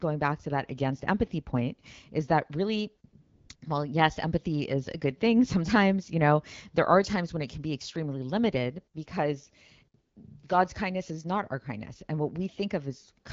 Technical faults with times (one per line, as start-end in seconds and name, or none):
3.21-3.61 AMR comfort noise
10.01-10.15 AMR comfort noise